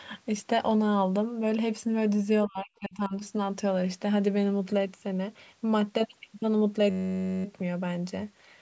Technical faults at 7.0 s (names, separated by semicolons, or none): system hang loop